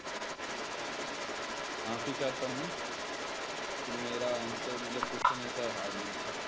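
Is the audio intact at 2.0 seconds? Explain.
No. At 2.0 s, as throughout the clip from 0 to 6.48 s, there is an echo leak: a second copy of the speech trails the original by 197 ms, only slightly quieter. This is likely a far-end loudspeaker pickup that the echo canceller failed to remove.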